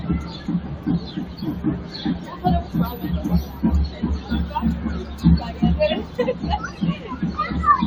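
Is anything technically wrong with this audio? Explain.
Yes. Throughout the recording, a noise suppressor applied to music or sounds is pulling the audio down. Built for speech, it treats anything steady, such as sustained tones, ambience and reverberant tails, as noise, and attenuates it by around 10 dB while letting sharp onsets through. The result is a fluttering, pumping thinness as sustains sink behind each attack. Unlike a compressor or gate, which respond to level, this reacts to how steady the sound is, so even loud sustained parts get dipped.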